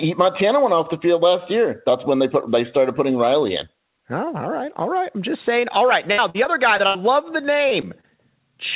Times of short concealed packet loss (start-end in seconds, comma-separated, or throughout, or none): 7.69-8.05